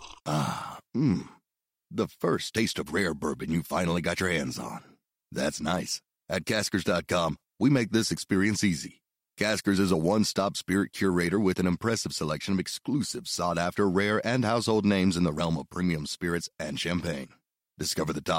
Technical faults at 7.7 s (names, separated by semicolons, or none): none